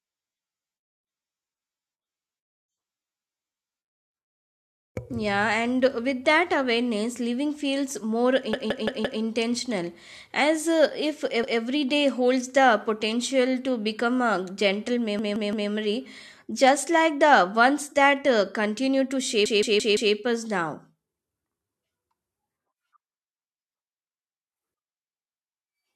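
A stuttering loop of one chunk of speech, about 0.17 s long, plays again and again with a hard join each time. This is a repeated buffer: new audio arrived late, so the device replayed its last chunk. The chunk length fits an 8192-sample buffer.

It happens at 8.53 to 9.22 s after "awareness living feels more", with four extra plays. At 11.44 to 11.61 s, between "as uh if" and "day holds the potential", there is one extra play. At 15.19 to 15.70 s, after "to become a gentle", there are three. At 19.46 to 20.14 s there are four.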